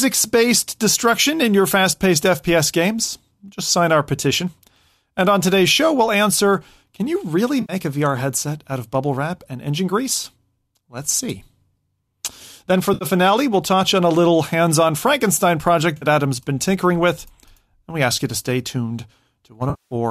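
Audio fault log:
7.61–7.73 s, 12.94–13.04 s, 15.97–16.05 s and 19.70–19.95 s: AAC frame loss with concealment. Brief smeared, noisy patches of 80, 70 and 50 ms, then a longer 210 ms stretch. The decoder fills each gap from the last good spectrum, and the gaps fit the roughly 10 ms frames of a stream that is likely AAC-ELD.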